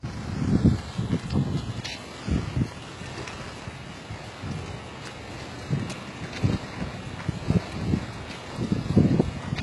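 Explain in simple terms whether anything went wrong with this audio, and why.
Yes, something went wrong, and it lasts the whole clip. The treble sounds gritty and metallic, and nothing is heard above about 11.5 kHz. This is likely HE-AAC compression, which rebuilds the highs by copying lower sounds upward, so they never quite match.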